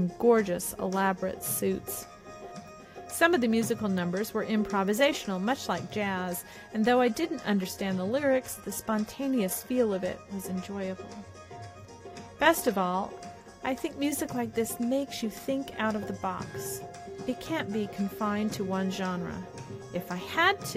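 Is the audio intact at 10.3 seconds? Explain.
No. From 7.06 to 13.06 s the adaptive stream switches to a lower bitrate: the connection slowed, so the player swapped to a cheaper encoding of the same audio, which fits a drop from roughly 96 kbit/s AAC to a 24 kbit/s HE-AAC stream. At 10.3 s the sound has more codec artefacts and nothing above 14.9 kHz. The quality changes abruptly at both ends of the stretch, with no gap in playback.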